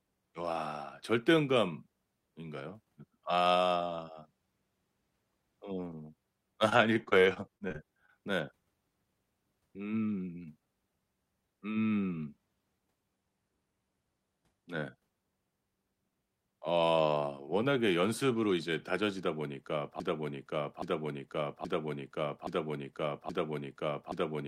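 Speech with two faults. From 6.69 to 8.10 s there is repeated packet loss, giving a robotic sound. Short holes keep appearing, the longest about 26 ms. Each is patched by stretching the preceding sound. About 14 percent of that stretch is concealed, and roughly 0.14 s of real audio is gone. From 20.0 s to the end there is a broken-record loop. A fragment of 0.82 s plays back to back, five times. The stream likely stalled and kept resending its last held piece, so the speech that should follow is lost.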